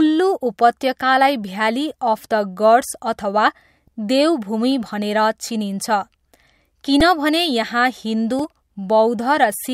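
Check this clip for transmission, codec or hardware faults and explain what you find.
Repeated buffer faults occur at 5.42, 7.00 and 8.39 s: late data made the device replay a 1.33 ms block, fitting a 64-sample buffer, giving brief clicks.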